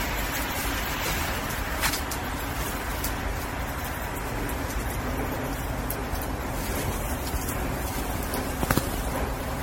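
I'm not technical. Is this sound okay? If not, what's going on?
No. Throughout, it has generation loss: swirly, hollow and smeared, with blurred attacks, worse than one rough compression. It was likely re-compressed about ten times.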